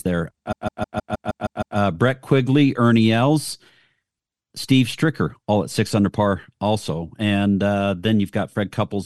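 Repeated frames run from 0.51 to 1.77 s in this speech clip: a block of about 157 ms, which fits a run of six compressed frames, plays eight extra times, producing a stutter. The decoder replays identical data, lengthening the audio by 1.25 s.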